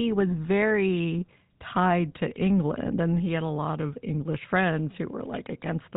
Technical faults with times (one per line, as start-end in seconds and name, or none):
0.00-5.96 GSM full-rate codec